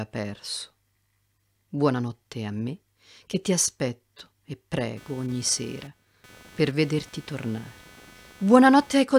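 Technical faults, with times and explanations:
4.97–9.19 s: computer activity noise, a buzz pulsing near 300 Hz about 25 dB down, as computer load shifts the shared ground, unlike steady mains hum.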